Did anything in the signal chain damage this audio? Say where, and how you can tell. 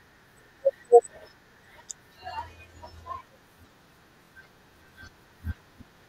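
Yes. Repeated frames at the codec or storage stage: at 0.45 s a 48 ms block plays twice, and at 4.24 s a 24 ms block plays three times, each heard as a stutter. Each adds 48 ms of duplicated audio.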